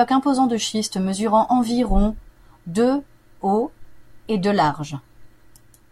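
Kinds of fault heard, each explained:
No technical faults are audible.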